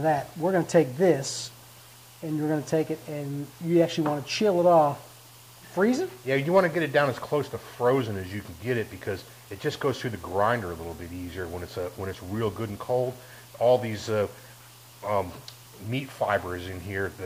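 No technical faults can be heard in this clip.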